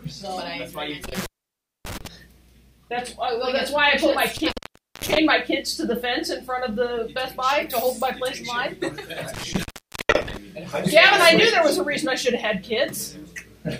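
Intermittent contact occurs three times, at 1.04 to 2.07 s, 4.37 to 5.18 s and 9.34 to 10.37 s. Each time, a loose plug or cable connection briefly breaks and the signal drops away, leaving faint hiss while the line is open. The gaps last about 0.59 s, 0.51 s and 0.46 s, and crackle marks the edges of each gap as the contact scrapes open and then settles closed again.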